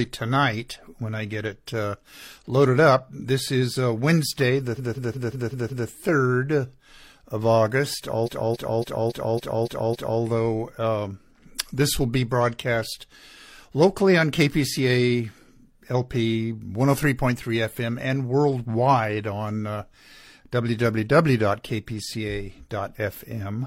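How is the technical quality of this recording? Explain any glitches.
The recording has two stutters caused by repeated frames. From 4.74 to 5.86 s, a 0.19 s slice of the speech loops six extra times; from 8.22 to 10.17 s, a 0.28 s slice loops seven extra times. A run of compressed frames was written more than once, so the decoder replays it, stretching the audio by about 3.1 s.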